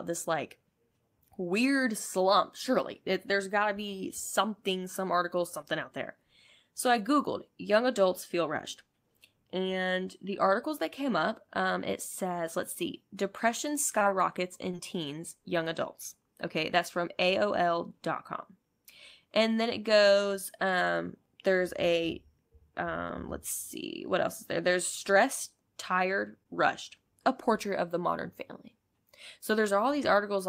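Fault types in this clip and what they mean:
Short concealed packet loss: five 20 ms chunks of speech never arrived and were filled by continuing prior sound, leaving brief smeared patches in the spectrogram.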